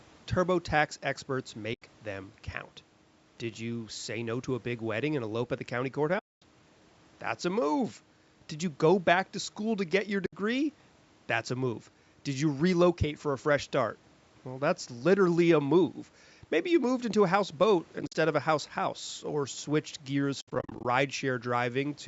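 Speech, with AAC frame loss with muting at five points. Soft-edged holes fall at 1.74, 6.19 and 10.26 s, lasting about 80, 230 and 70 ms. Each lost frame is decoded as silence. The overlapping windows fade the sound out and back in. From 17.99 to 18.15 s and from 20.41 to 20.85 s the dropouts are broken and scattered, with runs of roughly 50 and 70 ms. The hole lengths fit 10 ms frames.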